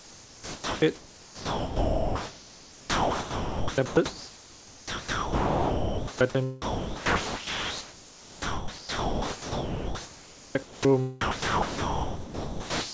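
From the start to 6.21 s the speech is badly choppy. The sound chopped by the voice detector leaves mostly comfort noise, about 5.8 s of it. The likely cause is the sender's detector repeatedly switching sending off and on.

Inside that stretch, from 1.60 to 2.72 s, there's a drift correction step. Everything runs 5.7% slow and drops 102 cents, about a semitone, likely as the clock matching refills its buffer.

From 6.62 to 10.87 s the chopping returns, with about 4.2 s swapped for comfort noise, so the speech comes through in broken fragments.

From 11.21 s to the end, the sound dropped by the voice detector gives way entirely to steady comfort noise, as if the quiet tail was taken for background.

Throughout, converter idle tones sit somewhere around 5 kHz, about 21 dB under the signal. That's an undithered delta-sigma converter cycling through repeating bit patterns. It sits within the call path's band, which stops at 8 kHz.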